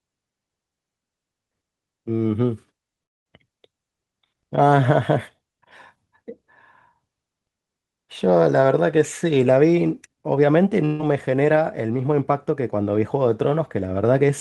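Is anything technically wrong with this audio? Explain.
Yes, there are two transmission faults in this speech.

From 3.03 to 3.27 s, the stream likely suffered a long network dropout, with no data reaching the receiver for roughly a fifth of a second. About 220 ms of speech never arrives. The receiver stretches the last sound across the gap, but that fill gives way almost at once to near silence lasting around 210 ms. The speech then picks up partway along, and the lost stretch is simply absent.

From 10.85 to 11.01 s there is a burst of packet loss. A run of packets worth about 140 ms failed to arrive in time for playback. The receiver fills the hole by carrying the preceding sound forward and lowering its level as the gap goes on, so there is no dead silence here. Instead you hear a brief held buzz or fading hiss, and the speech resumes with the intervening portion missing.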